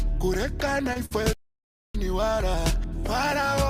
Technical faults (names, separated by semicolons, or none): short concealed packet loss; burst of packet loss; playback stall